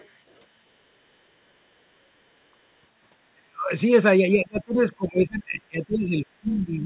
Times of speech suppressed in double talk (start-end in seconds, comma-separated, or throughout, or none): 3.33-3.71, 4.33-6.86